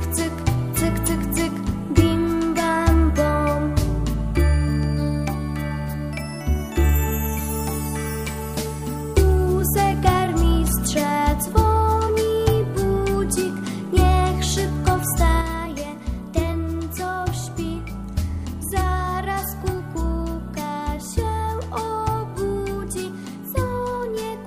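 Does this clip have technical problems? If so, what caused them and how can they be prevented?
Yes. From 15.41 s to the end, the level falls abruptly by about 6 dB and stays down. This is most likely one channel dropping out: with one stereo side gone, the mono sum keeps only half of what both channels shared, and anything carried only by the missing side vanishes. To prevent it, secure the cables and connectors on both channels and check both meters during recording.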